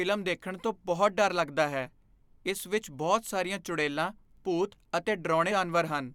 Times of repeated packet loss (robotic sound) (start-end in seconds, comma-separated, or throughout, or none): none